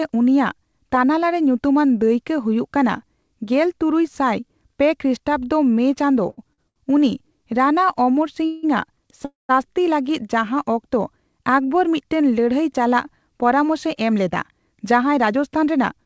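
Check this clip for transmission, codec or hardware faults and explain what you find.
Three kinds of network timing fault are audible in this speech, and all of them come from the receiving jitter buffer. The audio is band-limited to 8 kHz, which fits a G.722 call path.

Short stalls from a late packet come as a quick cluster at 6.30–6.39 s, 6.53–6.60 s and 6.68–6.78 s. Each time a packet arrived late. The buffer had nothing to play, so the receiver stretched the last sound. The fills last 75 ms, 45 ms and 78 ms. Nothing is lost. The sound just hangs briefly, with a slight buzz or dip, then resumes exactly where it stopped.

A call audio freeze occurs at 8.46–8.65 s and again at 9.25–9.51 s. The likely cause is packets being held up in transit until the buffer ran dry. The receiver extended the last sound as a fading buzz or hiss. The first fill runs 172 ms. The second runs 241 ms, and about 160 ms of it fades to silence. 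Playback then picks up where it left off, so a gap is inserted and little is missing.

A jitter buffer speed-up runs from 13.67 s to the end at 16.06 s. The buffer had built up excess delay. To drain it, the receiver cut many tiny pitch-period slices, about 150 ms in total. Playback runs at about 106% speed. The pitch stays the same, but the speech sounds slightly rushed.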